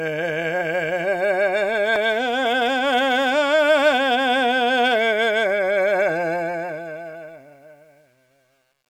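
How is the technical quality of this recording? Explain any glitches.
The music fades out over its last seconds, beginning around 6.33 s and ending at 8.90 s. That fade carries truncation distortion from 6.33 s to the end, worst from 7.3 s to 8.9 s, where the tail turns gritty. The fade stage kept too few bits, which fits a 10-bit stage, and added no dither. As the level dropped toward its smallest steps, the waveform collapsed into coarse square steps.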